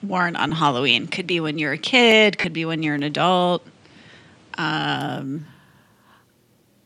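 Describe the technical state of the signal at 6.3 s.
At 6.3 s the speech signal is intact, with nothing beyond the light, even coding of a lossy codec that runs through the whole clip.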